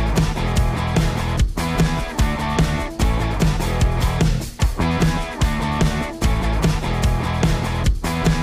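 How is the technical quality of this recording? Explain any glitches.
No glitches turn up anywhere in this recording. There is nothing in it that calls for an explanation.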